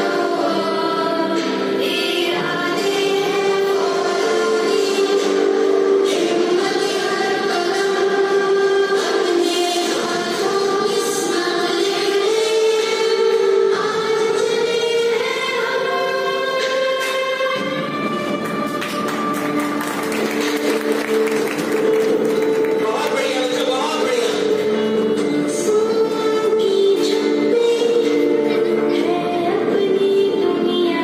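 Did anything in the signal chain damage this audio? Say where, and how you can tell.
No, nothing along the chain has left an audible mark on this signal; the level, continuity and frequency content hold steady with no stage showing its hand.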